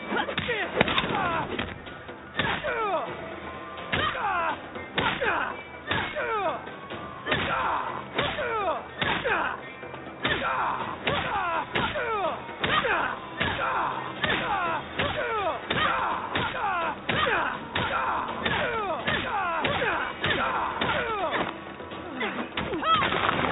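No technical faults can be heard anywhere in this recording.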